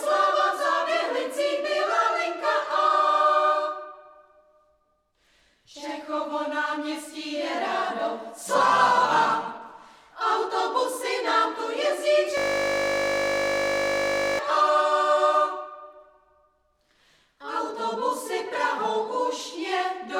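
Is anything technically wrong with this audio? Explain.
Yes. From 12.38 to 14.39 s there is a system hang loop. The system froze while the sound hardware kept replaying its buffer. A 20 ms slice repeats, which fits a 20 ms buffer. It becomes a steady 50 Hz buzz.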